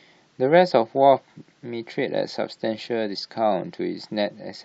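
No technical faults are audible anywhere in the speech.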